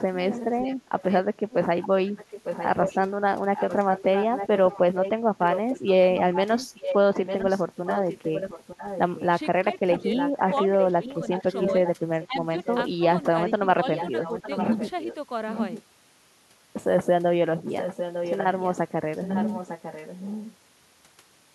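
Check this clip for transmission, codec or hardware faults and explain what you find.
Two kinds of fault stand out, both pointing to echo cancellation trouble at an end using a loudspeaker.

Echo leak, from 0.3 to 12.84 s, 13.94 to 15.83 s and 17.65 to 20.53 s: the canceller likely failed to subtract the loudspeaker pickup, so the speech returns as a copy delayed by about 0.9 s, roughly 10 dB quieter than the original.

Speech suppressed in double talk, at 2.85 to 2.9 s and across 9.63 to 14.47 s: with both sides talking, the canceller likely mistook speech for echo and attenuated it, giving a brief shallow dip first, then scattered drops of about 10 dB.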